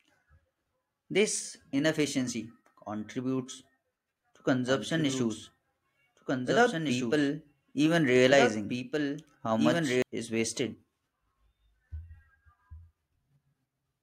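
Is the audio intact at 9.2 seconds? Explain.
No. At 9.2 seconds the clip is inside a doubled audio track fault that runs from 4.68 to 10.02 s. A second full-band copy of the speech trails the original by about two seconds, a few decibels quieter, most likely captured again through a slower path. Unlike an echo or reverb, this copy has no decay tail and no added room colour, and it cuts in and out abruptly at the span's edges.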